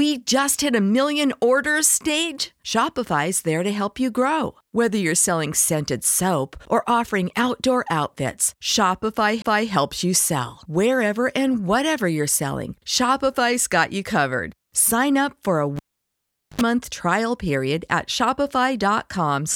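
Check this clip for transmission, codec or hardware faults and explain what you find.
Two hardware faults occur in this speech clip.

CD skip, 9.42 to 9.44 s, just before "you sell": the laser jumped to another turn of the disc's spiral, giving a tick, a brief mute of about 20 ms, and a sudden jump in playback position.

Cable pulled and plugged in, 15.76 to 16.61 s, between "up for a" and "trial period at": a live lead came out, causing a pop and about 0.8 s of near silence. A 73 ms burst of 50 Hz mains buzz followed as the plug's tip made contact, then a second pop as the sound returned.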